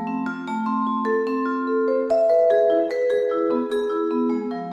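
From 2.03 to 4.09 s a call bitrate drop turns the sound coarse and muffled, fitting roughly 18 kbps; unlike packet loss, nothing drops out.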